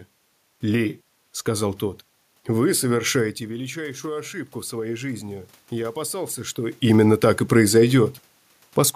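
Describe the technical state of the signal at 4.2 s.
At 4.2 s the signal is inside a stretch of automatic gain rising, running from 3.38 to 6.85 s and ending just before "так и". After the level at the microphone fell by about 12 dB, the gain control slowly added about 6 dB, so speech and room noise swell together. On a waveform the envelope climbs gradually across those seconds, and a spectrogram shows the noise floor brightening evenly at all frequencies along with the speech.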